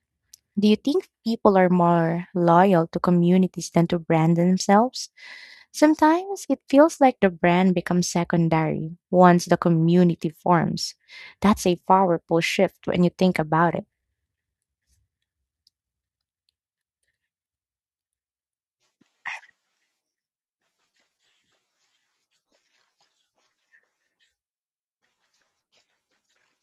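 No technical faults are audible anywhere in the speech recording.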